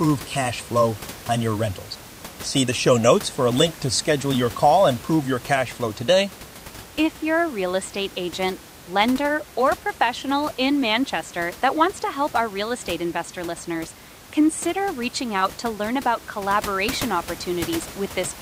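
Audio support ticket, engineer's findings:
No system faults found; room noise about 17 dB below speech only.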